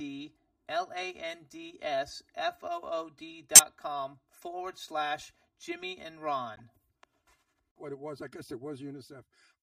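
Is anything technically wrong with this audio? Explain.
Yes. Throughout the speech, one channel runs late by roughly 3 ms before the two are summed to mono, giving channel delay (comb filtering): evenly spaced notches starting near 150 Hz make the voice hollow and phasey.

At 3.55–3.60 s, just before "com forward slash", and again at 6.56–6.60 s, damaged data in the compressed stream makes the decoder lose sync and hunt for the next frame, producing a brief glitch.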